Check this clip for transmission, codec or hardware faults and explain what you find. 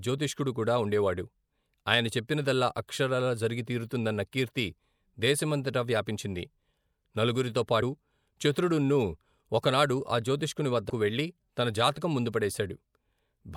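Two brief dropouts where compressed frames were skipped, at 7.81 s and 10.89 s, the second just before "వెళ్లి తన జాతకం ముందు". At each point the decoder lost a short run of coded frames, whether they were missing or rejected as damaged. The speech then jumps ahead by roughly 70 ms, which fits about three 24 ms frames. A sliver of the speech is simply absent.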